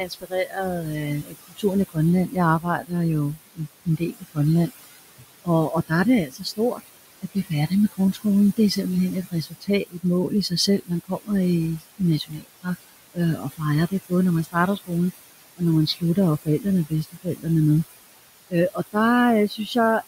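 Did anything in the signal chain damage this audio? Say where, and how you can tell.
Yes. The noise suppressor in the call processing stage shows noise suppressor artifacts across the whole clip. It pulls the steady room noise down by about 18 dB frame by frame. That noise sits about 14 dB below the speech. So the background sinks in the gaps and rises back under the talking.

The same stage also causes speech cut by the noise suppressor. It mistakes parts of the speech for noise and turns them down with the background. This happens from 0.0 to 8.58 s, 9.31 to 14.91 s, 15.57 to 17.46 s, 18.5 to 18.95 s and 19.49 to 19.76 s. The deepest drops are about 22, 21, 19, 19 and 10 dB. The first stretch loses the most, roughly three seconds in all. Those parts sound swallowed.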